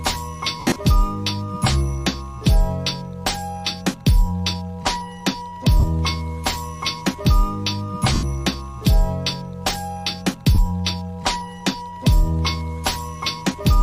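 Brief noisy smears interrupt the sound at 0.60 to 0.76 s, where about 140 ms goes missing in pieces, the longest run roughly 70 ms, then at 5.80 to 5.84 s (40 ms), 8.14 to 8.24 s (90 ms) and 10.55 to 10.58 s (30 ms). These are lost LE Audio frames: the LC3 decoder fills each gap by replaying the last spectrum with random signs, so tonal content turns to hiss, fitting 10 ms frames. Light compression is also present.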